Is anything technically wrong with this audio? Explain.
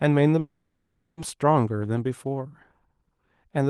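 Yes. From 0.39 to 1.19 s there's a call audio freeze. The speech stalls into a fading buzz, likely from the jitter buffer running dry, then picks up where it stopped.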